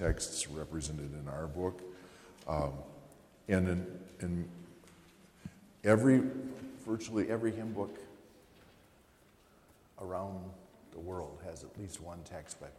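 From the start to about 7.24 s there's a wrong sample rate fault. Everything runs at 0.919 times normal speed and sits about 1.47 semitones flat, so the sound drags slightly low and slow. That ratio fits 48 kHz material played back at 44.1 kHz without conversion.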